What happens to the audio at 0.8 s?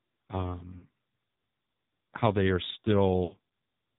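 Lost AMR speech frames cause a dropout from about 0.78 to 0.85 s. Radio errors corrupted the speech data there, so the decoder had nothing valid to play. For roughly 40 ms, consistent with two 20 ms frames, it repeated its last good pitch and vocal tract settings at falling gain. The result is a brief smeared warble that dips in level, then speech resumes weak or rough for a moment.

That glitch sits inside AMR narrowband mobile codec processing that affects the whole clip. The codec models the voice with a few pulses per subframe, and with its 8 kHz sampling it passes nothing above 4 kHz. The damage is heavy, consistent with a mode near 5.9 kbps, so around 0.8 s the speech already sounds muffled, buzzy and synthetic.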